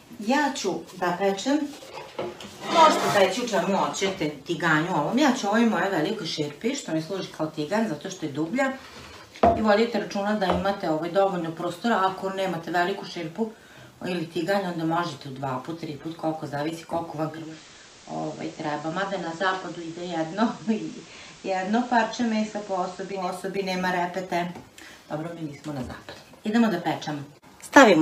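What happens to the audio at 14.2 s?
Nothing goes wrong at 14.2 s; the audio plays through that moment intact, with no dropout, click or other disturbance.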